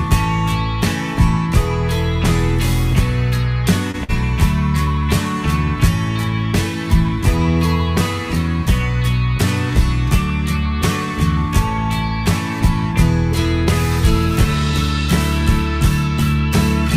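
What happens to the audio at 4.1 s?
A burst of packet loss runs from about 4.04 to 4.11 s. Several consecutive packets never arrived in time, so the receiver stretched the last sound for about 50 ms while fading it down. Playback then jumps ahead, skipping roughly 40 ms of audio.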